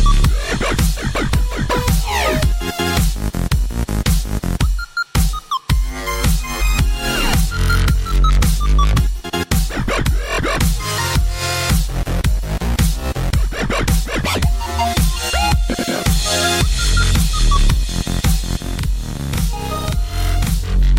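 From 18.60 s to the end, a channel delay (doubling) appears. One channel arrives about 42.67 ms late, which fits a 2048-sample buffer, and when both are summed to mono the late copy sounds as an equal-level slap echo trailing every sound.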